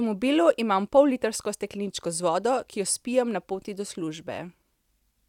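No technical faults are audible anywhere in this recording.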